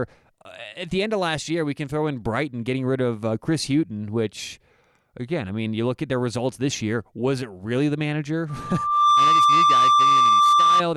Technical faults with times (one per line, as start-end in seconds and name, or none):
8.49-10.82 loudspeaker feedback squeal